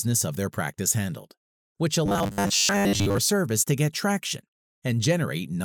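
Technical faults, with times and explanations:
2.06 to 3.18 s, robotic sound from repeated short buffers: new audio likely arrived too seldom, so a slice of about 10 ms was repeated over most of this span, imposing a fixed 100 Hz buzz.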